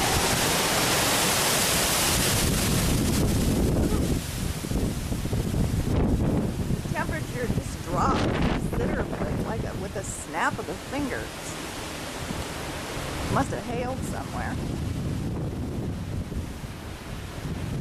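One channel drops out from 13.43 s to the end: the level falls abruptly by about 6 dB, likely because one stereo channel was lost before the mono sum.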